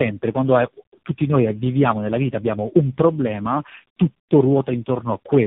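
Across the whole clip the speech carries the marks of tandem speech coding: the sound points to a chain of roughly four speech codecs in a row, ending in something like narrowband AMR, each decoding and re-encoding the previous one's already degraded output. The result is rougher, more muffled and warblier than any single codec would make it. On a spectrogram nothing appears above 3.6 kHz, and the harmonics look smeared and blotchy rather than cleanly striated.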